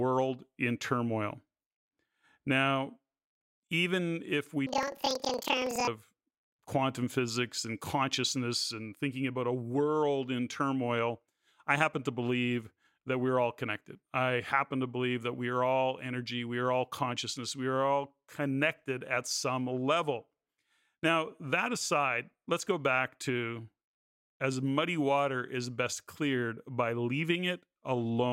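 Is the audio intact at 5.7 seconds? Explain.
No, 5.7 s sits inside a planar-read-as-interleaved stretch from 4.67 to 5.92 s: roughly 46 ms blocks replay left then right at double speed, so speech jumps an octave with a 21.5 Hz flutter.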